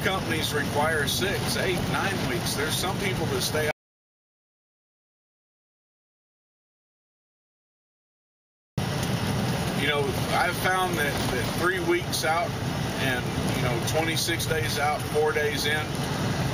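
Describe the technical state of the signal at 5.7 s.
At 5.7 s you're right in the middle of an audio dropout to silence, which runs from about 3.71 s to 8.78 s, so roughly 5.06 s of material is just gone. The sound cuts off abruptly and comes back just as suddenly, and in between there's dead digital silence with no room tone at all. That points to the input being lost, likely a disconnect or a stray mute, while the recorder kept writing silence.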